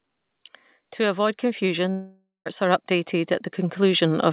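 From 0.96 s to the end, automatic gain rising lifts the level steadily: speech and background noise grow louder together over several seconds. On a waveform the envelope widens gradually, and a spectrogram shows the noise floor brightening along with the speech.

At 1.9 s the sound breaks into a buzzy, fading continuation of the last moment, then about 160 ms of near silence, and returns at about 2.48 s with roughly 560 ms missing. This is likely a long network dropout that the receiver filled in. The waveform shows a decaying, repetitive stretch and then a flat gap, and the spectrogram shows smeared, stationary bands before going dark. Throughout, nothing is heard above 4 kHz, which fits a narrowband telephone codec such as G.711.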